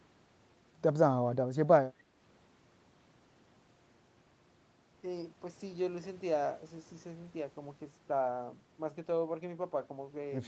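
No technical faults can be heard in this clip; the 8 kHz upper limit is simply the normal bandwidth of the call path it went through.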